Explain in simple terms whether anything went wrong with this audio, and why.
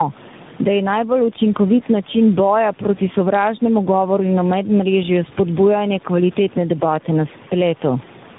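Two things went wrong, and both last for the whole clip. The first is gain pumping. Loud and soft parts end up closer in level and the sound is squashed, likely from a fast limiter fighting gain set too high. The second is tandem speech coding. The speech passed through three phone speech coders in a row, each reworking the last one's output. It sounds rough, muffled and warbly, with nothing above 3.8 kHz.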